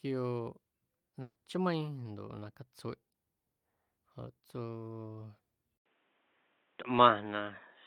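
At 1.21 to 1.37 s, a burst of packet loss: the receiver stretches the last sound and fades it out for 140 ms, then 40 ms of silence, and the audio resumes past a missing stretch rather than simply dropping out. From 5.78 s to the end, after an 80 ms silence, the sound turns duller, with nothing above 3.8 kHz, a level change of about 5 dB and new background noise. The likely cause is the input switching to a poorer device, since the tone changes in one step and then holds.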